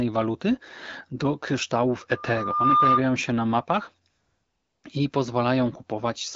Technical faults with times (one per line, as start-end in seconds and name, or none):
2.09-3.03 loudspeaker feedback squeal
4.09-4.83 AMR comfort noise